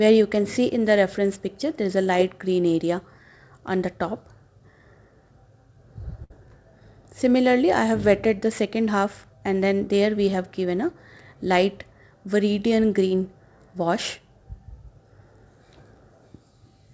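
At 6.24 s a burst of packet loss opens a gap that runs to about 6.32 s. Roughly 60 ms of audio never arrived in time, and the receiver covered the hole by extending the last sound for about 59 ms, lowering its level as it went. The result is a short held tone or fading hiss in place of the real signal, after which playback resumes further along with that stretch simply gone.

From 13.08 to 13.15 s there is a short concealed packet loss. About 20 ms failed to reach the decoder, and the receiver synthesized roughly 25 ms of continuation from the preceding sound before crossfading back into the real audio, with around 11 ms trimmed to realign. It is heard as a brief smear or slight wobble, and any very short sound in that spot can drop out. Both gaps sit within a call path whose band stops at 8 kHz, consistent with G.722 at 64 kbps.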